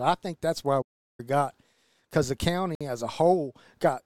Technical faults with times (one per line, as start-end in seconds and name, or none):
0.81-1.20 playback stall
2.75-2.81 Bluetooth stall